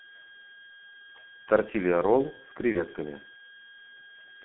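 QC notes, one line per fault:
Throughout: switching supply whistle. A thin high whistle sits between about 1.61 and 1.64 kHz, drifting slightly within that band, at about 25 dB below the speech. It sounds like a power supply's burst-mode cycling leaking into the audio path.
Throughout: G.723.1 codec. Heavy damage. The band is squeezed to roughly 150 Hz to 3.4 kHz, so the speech is muffled and a bit hoarse, with smeared consonants. This fits a low-rate coder near 6.3 kbit/s whose voice model can't keep pace with fast changes.
2.72 to 2.88 s: VoIP packet loss concealed by the speech codec. A short gap gets filled with a stretched continuation that fades, and the voice stays thin and distorted well after, until about 2.88 s. This fits a single lost 30 ms frame, with the decoder extrapolating and then slowly recovering its state.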